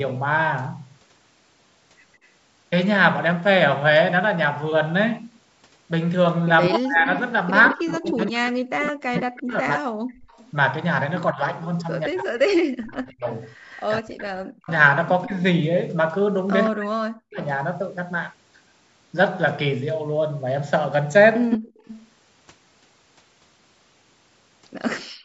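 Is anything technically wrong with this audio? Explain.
Yes. This speech clip has three kinds of fault, all tied to echo cancellation on a call.

Echo leak: a delayed copy of the speech comes back, 163 ms behind the original, at 2.23–2.27 s (a faint scrap, far below the speech), then across 7.66–13.84 s at around 10 dB down, and from 21.51 to 25.04 s at nearly the level of the speech itself. The likely cause is a far end on loudspeaker whose echo canceller let part of its microphone pickup through. The fixed 163 ms lag and the distinct second copy separate it from room reverberation, which smears sound rather than repeating it.

Speech suppressed in double talk: between 6.7 and 17.39 s, the talker's own speech repeatedly dips or drops out, for roughly 5 seconds in total, at worst by around 40 dB. This is likely the canceller failing to tell local speech from loudspeaker echo and turning both down. 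Unlike gating, it is the speech itself that is lost, in pieces.

Background gated by the echo canceller: the room sound briefly sinks while the loudspeaker plays, by about 13 dB for about 100 ms at 10.19–10.31 s, by about 21 dB for about 70 ms at 21.62–21.74 s, and by about 40 dB from 25.04 s to the end. The canceller is clamping the microphone hard. What sets this apart from double-talk suppression is that only the ambient bed drops, in short holes, and then returns. The call's microphone processing, which leaves nothing above 8 kHz, is working as expected.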